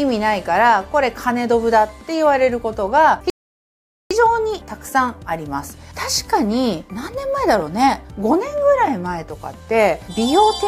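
At 3.30 s the audio halts in a rebuffering stall, going silent until 4.11 s while the player waits for more data. Playback then picks up exactly where it stopped, so about 0.81 s is added and nothing is skipped, unlike a dropout, which loses material.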